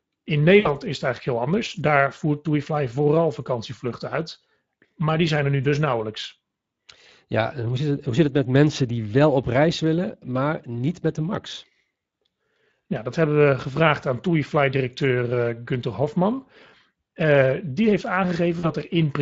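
Speech throughout, coded with the Speex codec at a setting whose hoarse, grainy texture fits a rate of about 20 kbps. The limited excitation bits leave a noisy rasp on voiced sounds, unlike the watery, swirling smear of transform codecs. VoIP packet loss concealed by the speech codec occurs at 0.59 to 0.73 s, just before "is het eigenlijk heel", and at 18.59 to 18.67 s, just after "die heeft". These gaps of about 60 ms and 40 ms are not silent dropouts. The decoder stretches the last sound into a buzzy tone or coloured noise that fades, and the voice stays weak or distorted briefly afterwards.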